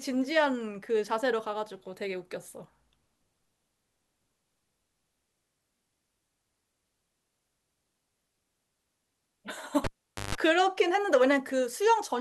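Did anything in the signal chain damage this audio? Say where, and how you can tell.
Yes. A cable pulled and plugged in at 9.84 to 10.35 s damaged the analogue wiring stage: a pop, about 460 ms of near silence, then roughly 150 ms of 50 Hz mains buzz as the plug tip touched first, and a second pop when the speech returned.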